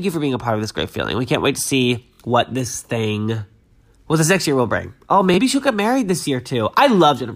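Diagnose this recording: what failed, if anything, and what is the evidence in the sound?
The wireless link failed: a Bluetooth stutter at 2.14 to 2.20 s and 5.34 to 5.38 s, as the receiver replayed its last slice of speech while data was missing. The first event loses 46.4 ms of audio, which fits two lost frames. The second loses 23.2 ms, which fits one. On a waveform, short identical slices repeat. On a spectrogram, they form a comb-like buzz pattern, and the speech resumes with that stretch missing.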